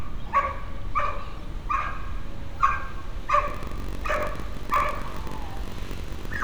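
From 3.46 s to the end, a block size mismatch (padded) sets in: each block arrives short and is topped up with silence, giving a steady 46.9 Hz buzz, which fits a 1024-sample read. The sound runs slower, at 0.938 speed, yet keeps its timbre, unlike a sample-rate mismatch.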